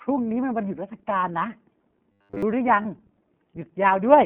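Throughout, the speech carries iLBC codec coloring: a 150 Hz to 3.4 kHz band with a rough, synthetic edge, unlike generic band-limiting, which would leave the speech smooth.

From 2.12 to 2.43 s, the sound becomes a rigid, metallic buzz at 100 Hz, robotic sound from repeated short buffers. The likely cause is a single 10 ms buffer replayed in place of every fresh one.

From 2.82 to 2.85 s, one 30 ms iLBC frame was lost, and the decoder filled the gap with a brief held, breathy vowel. Unlike the buzz, the speech recovers immediately.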